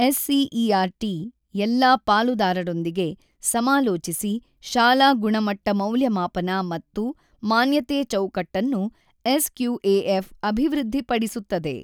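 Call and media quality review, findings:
No audible faults found in the speech path; no action required.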